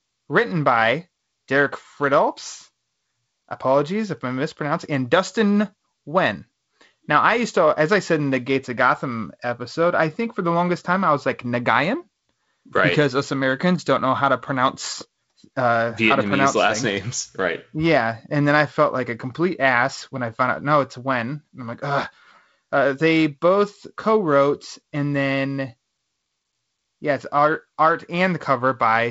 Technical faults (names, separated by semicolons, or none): none